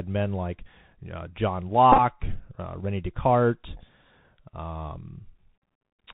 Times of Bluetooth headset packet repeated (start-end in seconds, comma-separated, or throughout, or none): 1.92-2.00, 5.63